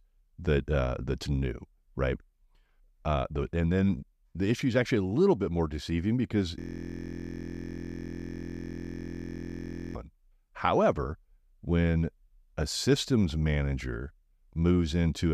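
From 6.59 to 9.95 s, a steady 43.1 Hz buzz replaces the speech. This is a system hang loop: a frozen driver left one 23.22 ms buffer repeating.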